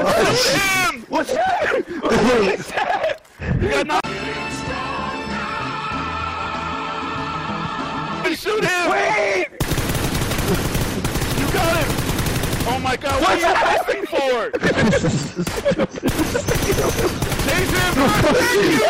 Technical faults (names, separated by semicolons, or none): none